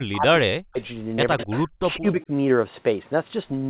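Right from 0.0 to 0.78 s the speech keeps ducking and breaking up, with dips as deep as roughly 40 dB across about 0.7 s of that stretch. That's speech suppressed in double talk, likely the echo canceller hearing both ends talking at once, failing to tell the local talker from loudspeaker echo, and clamping down on everything. It happens again briefly at 1.34 to 1.5 s, about a tenth of a second of cut-outs.

Overlapping that, from 1.38 to 1.59 s, you can pick out a faint trailing copy of the voice about 137 ms behind, sitting around 15 dB under the speech. That's an echo leak, likely a loudspeaker on the far side whose canceller didn't scrub everything its mic caught, so a delayed ghost got sent back. A weaker scrap of the same echo, about 25 dB down with the same 137 ms lag, shows up again at 1.93 to 1.99 s.

Then from 1.98 to 2.3 s the suppression is back, milder this time, pulling the level down by roughly 15 dB over about 0.2 s, likely the canceller reacting to double talk again. 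Throughout, everything sits under the 4 kHz ceiling of a narrowband G.711 call path, which is normal for this codec rather than a fault.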